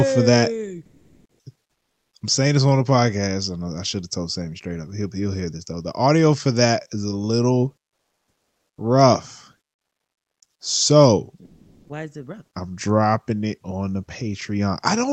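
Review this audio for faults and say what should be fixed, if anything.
Comfort noise in place of the background appears three times: 0.85 to 1.39 s, 1.71 to 2.11 s, and 11.45 to 11.89 s. Each pause, where the background sits about 55 to 61 dB below the loud passages, gives way to a smooth, featureless hiss. It is about 13 dB louder in the first gap, about 3 dB quieter in the second, and about 5 dB louder in the third. The likely cause is Opus discontinuous transmission synthesising noise while the sender stops sending. Unlike a noise gate, which leaves silence, noise remains but loses its texture. Disabling DTX, or sending real background during pauses, would prevent it.

An onset clipped by the voice detector follows at 11.86 to 11.89 s. Sound resumes abruptly, with about 30 ms of its soft beginning missing and the synthetic hiss running right up to the cut. This likely happened because the detector was slow to register the restart, so those first moments were never sent. 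Packet-loss concealment would smear or repeat sound. Here the start is simply absent, and the bandlimited Opus path tops out near 8 kHz. Adding a hangover or lookahead to the voice detector would prevent it.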